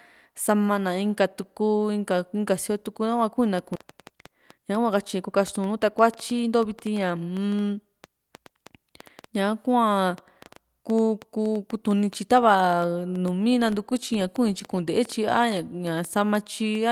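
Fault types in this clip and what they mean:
Train of clicks: Repeated short pulses of much the same shape, arriving at an uneven pace of about five per second from 3.59 s to 16.76 s, roughly seventy in all. They sit on top of the speech and carry through pauses, peaking about 5 dB above the signal. The regular shape and persistence point to a likely cause in electrical interference from nearby equipment or a faulty connection or power supply.
Skip ahead: Playback jumps forward at about 3.75 to 3.86 s. Around 0.7 s of speech is simply absent, and the material on either side is butted together with no inserted gap, so the delay shrinks by roughly the same amount. This is what happens when a stretch of already-buffered audio is discarded, for instance when a jitter buffer overflows, and later audio is played immediately in its place.
Jitter buffer speed-up: Twice shortly after the skip, speech runs faster while pitch stays put. 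From 4.31 to 5.29 s it plays at about 106 percent, trimming roughly 70 ms, and from 5.80 to 6.93 s at about 104 percent, trimming roughly 50 ms. The receiver is cutting out short pitch-period-sized pieces in succession to drain excess buffered audio and reduce delay, which leaves the first passage sounding slightly hurried.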